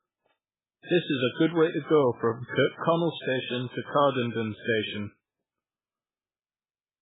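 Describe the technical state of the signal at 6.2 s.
At 6.2 s the speech carries the same heavy damage heard across the whole clip, most likely from MP3 compression at a starved bitrate, which fits something near 8 kbps. With bits that scarce, the encoder cuts everything above 3.8 kHz and drops weak frequency lines that flicker in and out between frames. The result is a dull, watery, swirling sound. A plain low-pass filter would only muffle the speech, without that shifting, bubbling texture.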